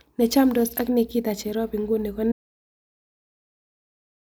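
At 2.32 s, right after "ak nikita cherop inguni", the speech cuts out mid-flow and the clip stays in complete silence through to its end, about two seconds later. This is an audio dropout to silence: the gap holds no room tone or noise floor at all, which points to the input being lost while recording continued, likely a disconnected device, failed link or accidental mute. Whatever followed in the speech is not recoverable.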